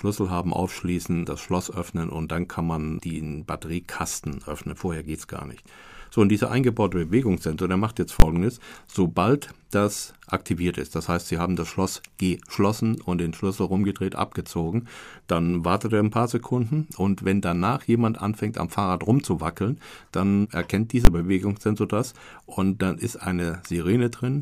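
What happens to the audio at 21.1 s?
At 21.05 s, just after "rumzuwackeln dann erkennt", the signal hits invalid numbers at full scale until 21.07 s. A calculation produced infinite or invalid values. These were clamped to the largest value the format can hold. For that 20 ms block the output sits pinned at one extreme value, far beyond the speech's peaks, instead of following the speech. The block is so short that the loud pops at its start and end merge. It is heard as a single sharp bang cutting into the speech.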